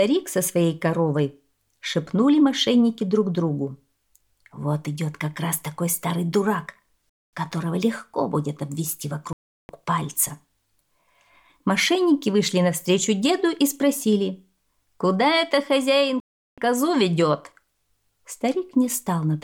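The sound cuts to silence three times: at 7.09 s for about 235 ms, at 9.33 s for about 362 ms, and at 16.2 s for about 376 ms. This pattern of a Bluetooth stall likely comes from radio interference delaying packets until the headphones' buffer emptied. An edit or a skip would instead jump ahead and lose material, and the clean silence rules out the crackle of a failing connection.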